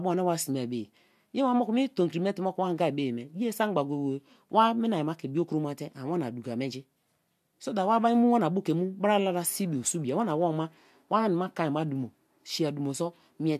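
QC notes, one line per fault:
No audible faults found.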